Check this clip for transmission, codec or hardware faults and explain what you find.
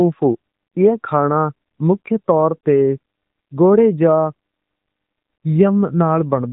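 One fault runs through the whole clip: AMR narrowband mobile codec coding. Nothing above about 3.8 kHz survives, so the speech has the boxed-in sound of a phone call. AMR-NB works at 8 kHz sampling and rebuilds each 20 ms frame from a vocal-tract filter excited by a few pulses per 5 ms subframe. The damage is plainly audible as a buzzy, synthetic edge on the voice, from coding at 10.2 kbps.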